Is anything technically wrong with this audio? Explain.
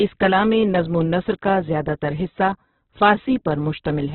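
Yes. Throughout, the speech is band-limited with nothing above about 4.1 kHz and sounds rough and grainy, likely from heavy Opus compression at a very low bitrate, around 8 kbps, with the encoder filling starved bands with noise.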